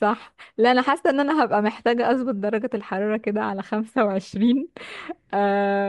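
From start to finish the speech carries plainly audible transform-codec damage, likely Bluetooth LC3 compression. Much of the upper spectrum has been zeroed and refilled with synthetic noise, so sibilants and breath turn grainy and hissy. Unlike a plain low-pass, the top is noisy rather than dull, and unlike the slower swirl of longer-frame codecs, the texture flickers quickly, which fits short 7.5 ms frames at a moderate bitrate.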